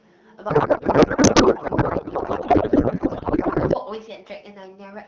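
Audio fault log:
0.49–3.76 s, codec payload misread: the speech gives way to garbled noise and warble that barely tracks it, then returns to the clear AMR wideband (HD Voice) sound, whose light coding fits a rate of about 12.65 kbit/s. The sender packed AMR frames octet-aligned, padding fields to byte boundaries, while the receiver unpacked them as bandwidth-efficient, with fields packed tight. Every parameter was read from the wrong bit position, so the decoder synthesised plausible but meaningless speech-like noise.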